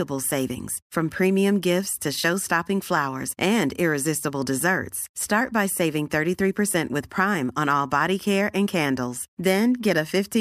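Nothing stood out as a technical fault on listening to this speech recording.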